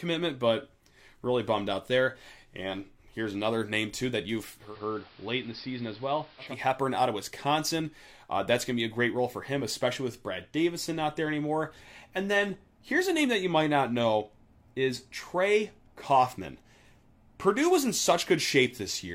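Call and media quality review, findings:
Digital radio blending to analogue, 4.56–6.59 s: speech cross-fades over 212 ms to the AM analogue feed, then returns. Level drops about 4 dB, steady hiss roughly 25 dB under the speech. Component: hybrid receiver losing digital lock. Unlike a codec bandwidth step-down, the change arrives with hiss and fades smoothly rather than switching abruptly.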